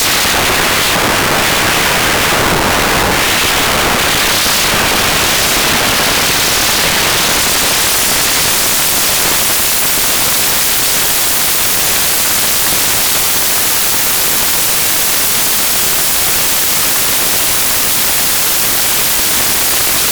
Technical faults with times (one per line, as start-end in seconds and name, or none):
0.00-20.12 samples built from the wrong bytes